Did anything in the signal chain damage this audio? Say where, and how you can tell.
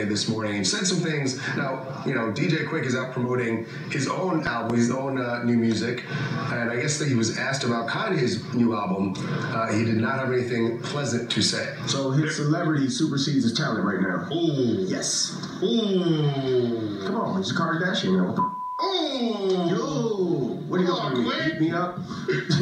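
Yes. A loud pop, two sharp transients between 4.47 and 4.72 s, peaking about 15 dB above the programme, which continues underneath. This is likely an analogue wiring fault, such as a connector or switch contact, injecting a voltage step that later stages shape into a thump.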